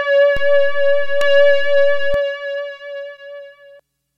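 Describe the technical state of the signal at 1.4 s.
At 1.4 s the signal sits inside a DC step: from 0.37 s to 2.14 s the waveform's zero line is shifted by an offset of about -15 dBFS, as if a biased input had been switched in. The jumps at each end are heard as low thumps while the sound carries on unchanged.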